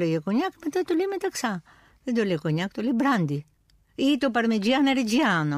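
No technical faults are audible.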